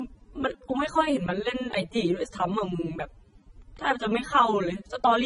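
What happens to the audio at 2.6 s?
At 2.6 s, as throughout, the speech is dull above 10.6 kHz with layered swirly, smeared artefacts, likely from transcoding between lossy codecs (AAC then MP3). Unlike a single codec, two distinct artefact textures overlap.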